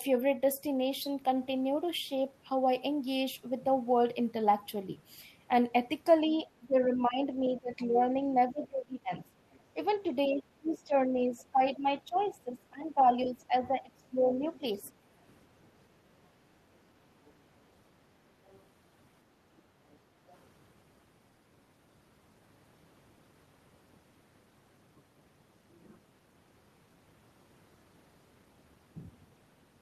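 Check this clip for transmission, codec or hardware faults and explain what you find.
Two echo-canceller faults affect this speech. From 6.27 to 15.08 s there is speech suppressed in double talk, likely because the canceller confused the talker with loudspeaker echo. The talker's own voice dips by up to roughly 20 dB, about five seconds in all. It is a loss of the main voice, not an added sound.

The other side's voice leaks through from 7.0 to 8.06 s and 9.54 to 15.33 s, at roughly 20 dB below the speech. Fainter scraps follow at 17.25 to 17.32 s, 18.46 to 18.62 s and 19.92 to 20.37 s. The likely cause is residual echo the canceller failed to remove. Unlike the suppression, a second voice is heard under the talker.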